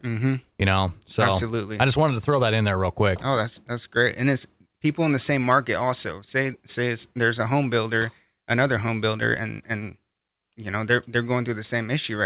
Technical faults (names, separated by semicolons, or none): none